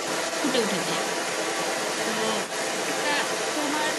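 Speech recording in which the echo canceller likely failed to strip the far end's loudspeaker playback from the microphone, so the other side's voice is leaking through from 0.0 to 3.98 s, sitting at roughly the same level as the main talker throughout.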